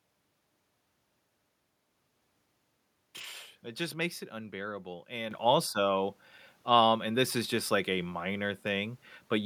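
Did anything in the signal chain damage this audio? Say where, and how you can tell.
Yes. At 5.31 s the level of the speech and the background noise jumps up together, by about 7 dB, in a single step. This is a microphone volume stepped up, and it happens in the call-processing stage: automatic gain control judged the input too quiet and raised the device's input volume at once rather than gradually. On a waveform the envelope widens abruptly at that point. On a spectrogram every band, including the noise floor, brightens along one vertical line.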